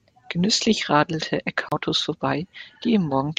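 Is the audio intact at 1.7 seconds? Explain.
No. A CD skip runs from 1.69 to 1.72 s. The laser jumped to another turn of the disc's spiral, so the speech mutes for about 30 ms and resumes from a different point. The waveform shows a short flat gap, and the spectrogram a thin vertical click and an abrupt discontinuity.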